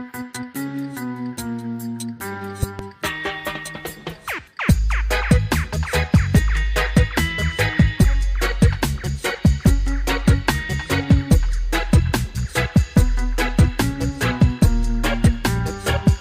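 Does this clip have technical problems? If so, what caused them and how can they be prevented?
Yes. There's a loud pop at 2.63 s, actually a pair of pops landing close together before 2.82 s, sitting well above the level of everything around them while the sound carries on underneath. That's the signature of a sudden voltage step or spike getting into the chain, most likely from a plug being seated, a switch being flipped, a static discharge or a driver glitch. The downstream circuitry turns it into that sharp double thump. To prevent it, mute or power down before touching connections or switches, and keep drivers and grounding in good shape.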